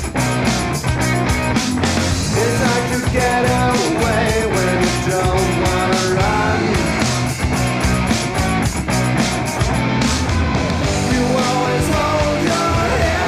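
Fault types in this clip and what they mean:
No technical faults were heard anywhere in the clip.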